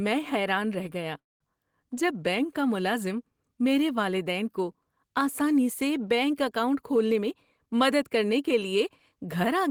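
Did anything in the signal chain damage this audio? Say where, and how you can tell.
Yes. From 1.19 to 1.43 s the speech stalls. A short fading continuation gives way to about 200 ms of near-silence, then the speech resumes exactly where it stopped, with nothing lost. This call audio freeze at the network stage was likely delayed packets draining the jitter buffer, so the receiver padded the gap.

From 7.13 s to 9.69 s the speech runs at about 108% speed but keeps its pitch, so it sounds hurried. This is jitter buffer speed-up in the receive buffer. After the backlog, the receiver trimmed pitch-period-length slices, about a fifth of a second in total, to bring latency back down.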